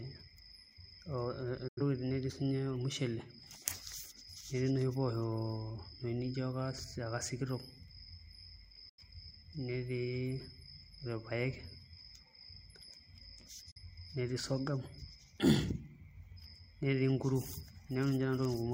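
At 1.68–1.81 s, 8.89–9.03 s and 13.71–13.81 s (before "netii sorghum"), digital broadcast dropouts: the receiver mutes with a quick 8 ms fade, not a click or stutter, losing the sound outright.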